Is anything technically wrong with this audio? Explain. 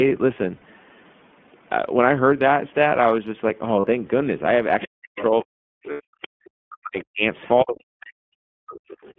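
Yes. The speech runs through the iLBC codec for the whole clip, with lost iLBC frames, the other side's voice leaking through, and speech suppressed in double talk.

The iLBC codec is present throughout. The sound is confined to roughly 150 Hz to 3.4 kHz, a narrowband line, and has a plainly audible rough, synthetic grain. It comes from each 20 ms frame's excitation being coded on its own, which fits the 15.2 kbps mode. It differs from simple low-pass filtering by that added buzzy texture.

Lost iLBC frames occur at 0.56 to 0.63 s (about 60 ms), at 3.80 to 3.87 s (about 40 ms), and as scattered losses between 5.92 and 6.01 s. The decoder fills each gap by repeating the last pitch cycle mixed with noise, so it sounds like a held, buzzy vowel. Clean speech returns at once, unlike a suppression dip.

The other side's voice leaks through at 4.81 to 5.44 s, 6.22 to 6.48 s, 6.99 to 7.04 s, 7.39 to 7.49 s and 8.89 to 9.13 s. 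These are faint second-voice scraps, far below the main talker. They are likely loudspeaker echo that the echo canceller failed to remove. They are a separate, distinct voice, not a distortion of the talker.

Speech is suppressed in double talk from 4.87 to 7.23 s and from 7.64 to 8.78 s. The talker's level dips deeply, by up to about 40 dB, while the echo is present. This is likely the canceller turning everything down. It differs from frame loss because the gaps go quiet or dull rather than buzzy.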